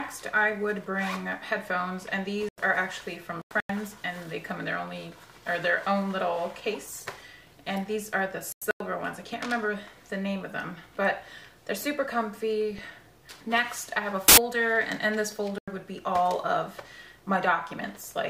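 Compressed frames in this audio arrived with flipped bits, and the decoder rejected them, so the player substituted silence: corrupt frame muted. Abrupt holes, each spanning several frame lengths, open at 2.43 to 2.60 s, 3.33 to 3.70 s, 8.52 to 8.80 s and 15.58 to 15.82 s, with the timing intact around them. Two further corrupt FLAC frame events, covering four and two frames, were decoded without the checksum being checked, so the predictor ran on wrong values from the damaged bit on. The result is an error from 12.71 to 13.04 s peaking at about -27 dBFS, and a much louder one from 14.28 to 14.38 s reaching about -6 dBFS, each stopping cleanly when intact frames resume.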